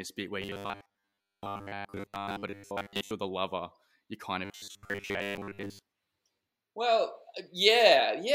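From 0.42 to 3.11 s and again from 4.45 to 5.82 s, the speech takes on robotic sound from repeated short buffers: a rigid 100 Hz metallic buzz. It likely comes from starved input, with a 10 ms buffer replayed for most of each stretch.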